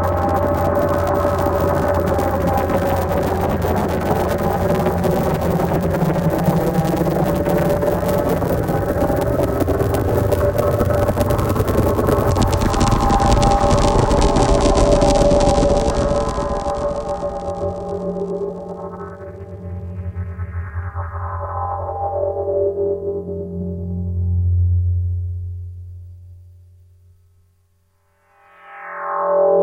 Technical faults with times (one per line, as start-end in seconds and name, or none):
none